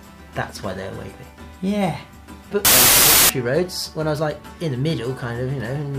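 From 2.65 to 3.29 s there is a wrong sample width fault. Packed 24-bit data are read as 16-bit, so loud noise buries the sound, playing at 0.667 times speed and lower pitch.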